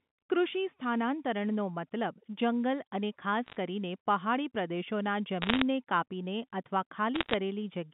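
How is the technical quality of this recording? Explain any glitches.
The recording has three short bursts of damage. Bit errors on a digital phone line occur at 3.46–3.56 s, at 5.42–5.62 s just before "કાપીને અથવા", and at 7.15–7.34 s just after "કાપીને અથવા". Flipped bits in the G.711 mu-law stream each corrupt a single sample. When a sign or high-order bit is hit, that sample jumps sharply, so the speech carries sharp ticks and a brief crackle. The rate sounds like roughly half a percent to one percent of bits, heaviest in the middle burst. The telephone band, about 150 Hz to 3.6 kHz, is audible throughout.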